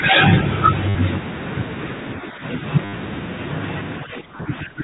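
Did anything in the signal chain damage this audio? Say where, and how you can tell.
Yes. Network stage: packet loss with last packet repeated at 0.89 s, 2.85 s and 4.37 s (60, 80, 20 ms). Each one is a stutter buzzing near 100 Hz, which fits 10 ms packets.

Call processing: the speech sinks roughly 10 dB at 2.17–2.43 s and about 15 dB at 4.04–4.83 s, likely speech suppressed in double talk by the echo canceller.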